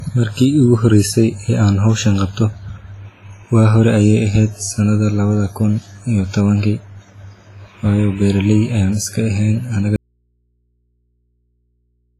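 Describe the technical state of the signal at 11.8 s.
At 11.8 s the signal is inside an audio dropout to a faint residue that runs from 9.96 s to the end. The feed was likely lost while the path stayed live, so only mains hum remains, roughly 50 dB below the speech level.

Heavy WMA compression runs through the whole clip and is likely the cause of the washy, ringing texture and of the empty band above 15.5 kHz, which fits a low bitrate around 24 kbps.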